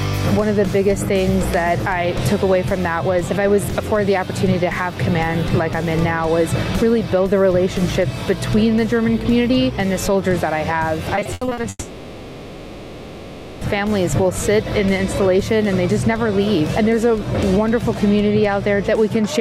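From 11.15 to 11.65 s there is repeated packet loss, with a robotic sound. Small pieces of audio drop out one after another. The longest hole is about 80 ms. Each hole is filled by stretching the sound just before it. Nearly half of this half-second is patched this way. The result is choppy and mechanical. Fragments of real audio alternate with smeared fill.

At 11.69 s the audio breaks off and does not return until 13.63 s. For almost two seconds the last sound is drawn out as a buzz or hiss that fades. The real signal never arrives, and the final instant falls briefly silent before audio resumes. When it resumes, the missing stretch is simply gone. This is likely a long network dropout, following straight on from the choppy loss before it.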